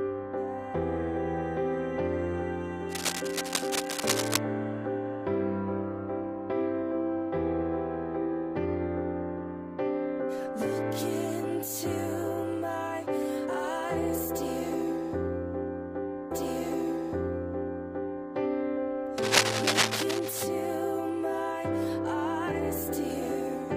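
Cable scratch noise appears from 2.87 to 4.38 s and again from 19.18 to 20.43 s: dense, uneven bursts of scratching and rustling sit over the audio at roughly the same loudness as the programme itself, likely from a worn cable, connector or control being moved so its contact resistance jumps about rapidly. A stream segment repeated at 16.30 s, where the audio jumps back and replays until 18.30 s, adding about 2.0 s to the clip with a small blip at the jump, as the player fetched or queued the same segment twice.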